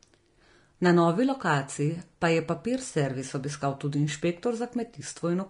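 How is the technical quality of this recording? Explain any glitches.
The speech carries plainly audible lossy-codec damage from start to finish, most likely from Vorbis compression at a low setting. The treble sounds hissy and grainy, tones have a roughened edge, and consonant attacks are smeared, which fits a rate of around 36 kbps. At that rate the encoder lowers its cut-off and quantises the upper residue so coarsely that fine detail turns into noise of similar energy. That traces a spectral floor rather than adding a steady hiss: unlike broadband background noise, the graininess rises and falls with the speech itself.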